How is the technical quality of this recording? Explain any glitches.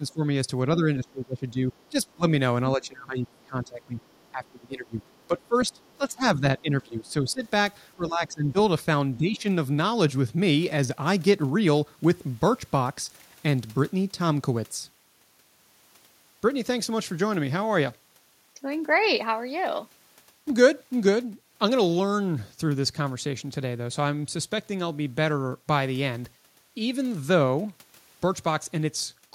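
The recording has clear double-talk problems in its first ten seconds.

Speech suppressed in double talk occurs at 0.0–2.2 s, 2.77–8.58 s and 9.17–9.45 s. The talker dips by up to about 20 dB, or about 10 dB in the last instance, likely because the echo canceller turned everything down while both sides spoke.

The other side's voice is leaking through at 1.82–2.14 s, 4.0–4.51 s, 5.17–5.96 s and 7.08–7.49 s. Faint scraps, about 30 to 40 dB below the talker, are likely residual loudspeaker echo the canceller missed.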